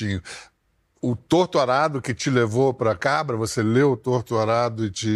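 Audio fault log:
No faults heard anywhere in this speech recording.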